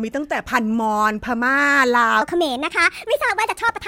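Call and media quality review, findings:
Wrong sample rate, 2.22 s to end of clip. Speech jumps high and hurried. Speed up 1.38x, pitch up about 5.5 semitones, both shifting together. Fits 32 kHz audio handed to a 44.1 kHz output with no resampling. Probable component: playback or mixer stage. Rate mismatch carries through to the last sample.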